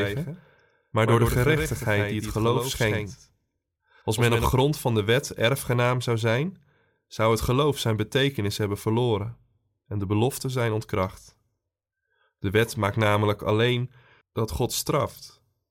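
From the very start of the speech until 4.46 s, a doubled audio track runs under the main signal. A second full-band copy trails by roughly a tenth of a second, a little quieter than the original, most likely from the same audio being captured again through a slower path. Unlike an echo or room reverb, it repeats exactly once, with no decay or room colour, and it cuts off abruptly just before "van de wet erfgenaam".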